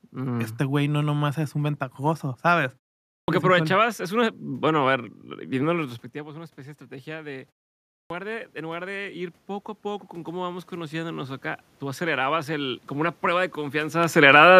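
At 3.15 s, after a pause of about 0.44 s, there is a clipped start after a pause. The output device has gone idle in the silence and is still waking, so roughly 0.13 s of the onset is swallowed and the speech bursts in abruptly. On the waveform the envelope jumps from flat to full amplitude with no rise. A spectrogram shows a hard vertical edge where the first sounds should be. The same happens at 7.97 s, after about 0.53 s of pause, again losing roughly 0.13 s.

From 5.8 s to 14.55 s the automatic gain is rising. Around 6.0 s the talker moves away and the level at the microphone drops by about 16 dB. The gain control responds by raising its gain by about 10 dB over several seconds, so the voice and the room noise swell together. The waveform envelope climbs gradually, and the background band on the spectrogram brightens along with the speech.

From 14.08 s to 14.45 s, as the talker comes closer again, the automatic gain is falling. 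The now-louder input drives the control to pull its gain down by about 4 dB within roughly a third of a second. The sound starts hot and then sinks, and its background drops with it. On the waveform the peaks tall at first, then shrink, and the whole spectrogram dims across all frequencies.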